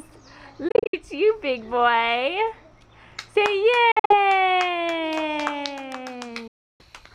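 Audio packets likely failed to reach the headphones in time and were discarded, causing a Bluetooth dropout three times. From 0.68 to 0.99 s the sound breaks into silent gaps totalling 168 ms, the longest 61 ms. From 3.91 to 4.15 s, 137 ms goes missing in short holes, the longest 46 ms. From 6.47 to 6.83 s, 320 ms of sound drops out. Each time, the sound resumes further along, as if it had played on unheard.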